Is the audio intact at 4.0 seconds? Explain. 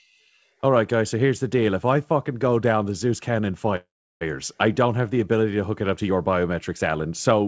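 No. At 4.0 s the clip is inside a call audio freeze running from 3.76 to 4.23 s. The last sound is carried on briefly as a fading buzz or hiss, then about 340 ms of silence fills the rest of the roughly 0.45 s gap, likely because delayed packets left the jitter buffer empty. Unlike a packet-loss dropout, nothing is cut out. The speech resumes exactly where it stopped, only later, so a pause has been inserted.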